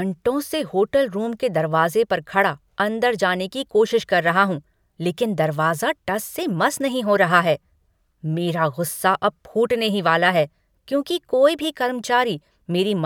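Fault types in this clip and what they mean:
No technical fault can be heard anywhere in this speech recording. There is nothing to list for it.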